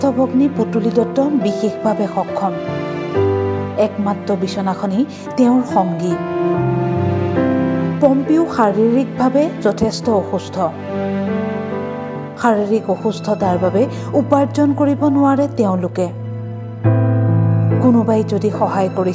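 No technical faults can be heard anywhere in this clip.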